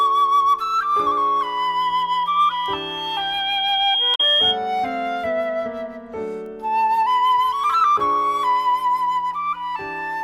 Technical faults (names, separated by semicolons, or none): loudspeaker feedback squeal; bit error spike; damaged data in a compressed stream